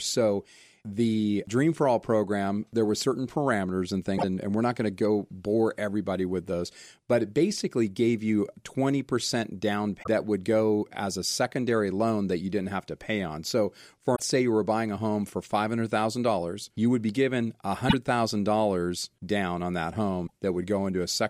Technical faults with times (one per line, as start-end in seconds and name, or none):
4.14-4.24 damaged data in a compressed stream
9.99-10.07 damaged data in a compressed stream
14.12-14.20 damaged data in a compressed stream
17.86-17.94 damaged data in a compressed stream
20.23-20.32 damaged data in a compressed stream